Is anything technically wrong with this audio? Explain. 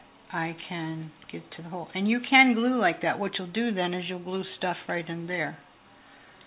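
No, nothing is technically wrong with this audio.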